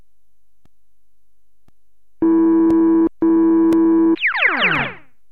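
From 0.66 s to 4.76 s, evenly spaced ticks recur every 1.02 s, each a gap of a couple of milliseconds dropped to silence. These are periodic USB or driver dropouts: something repeatedly stalls the audio bus or driver, so brief chunks of sound are lost.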